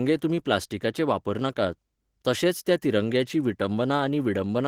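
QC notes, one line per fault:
throughout: Opus voice compression. The speech carries a plainly audible hoarse, slightly robotic graininess. The coder is splitting the band, with linear prediction below 8 kHz and a thin transform layer above, while coding the excitation coarsely. That fits roughly 16 kbps.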